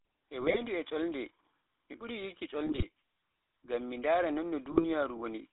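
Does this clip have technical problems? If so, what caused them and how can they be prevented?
Yes. The whole clip went through the GSM full-rate codec, which fits a 13 kbps stream. The codec models the vocal tract and drives it with a coarse, regularly spaced pulse excitation, so the speech carries a clearly audible buzzy, gravelly roughness. The channel passes only about 300 Hz to 3.7 kHz, so the speech sounds thin and boxed in. To prevent this, use a wideband codec such as AMR-WB or a VoIP path instead of GSM full rate.

GSM bit errors corrupt the decoder at 0.40–0.58 s, 2.66–2.85 s and 4.72–4.85 s. Flipped bits reach the filter, pitch and gain parameters, so a few consecutive frames decode with a warped spectrum or a sudden jump in level. The speech breaks into short squawks, pops and gargling at those points, which points to error rates of roughly 2%. To prevent this, keep the radio link strong, or use a channel with stronger error protection and bad-frame masking.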